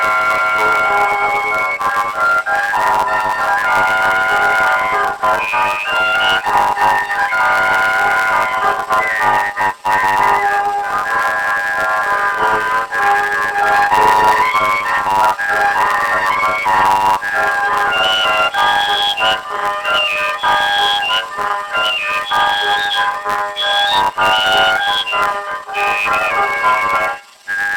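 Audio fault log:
Throughout: planar audio read as interleaved. Each 10 ms block is stored as all its left samples followed by all its right samples, but the player treats it as alternating left-right pairs. So every block plays twice at double speed, once for each channel, and the overall pace still comes out right. With blocks this short you don't really hear an octave jump. Instead there's a robotic buzz riding on everything at the 100 Hz block rate.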